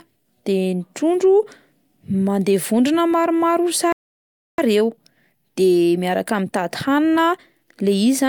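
At 3.92 s the player most likely ran short of buffered data, causing a playback stall: the speech cuts off mid-flow and the output stays silent for about 0.66 s, until 4.58 s, when it resumes from the point where it stopped.

From 4.58 s to 7.58 s the player works off that backlog through time-compressed catch-up, removing small slices and cross-fading across the joins. The speech runs about 1.1 times faster at unchanged pitch, sounding hurried for those three seconds.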